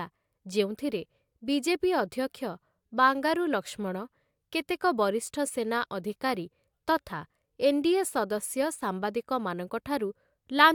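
No technical faults are audible.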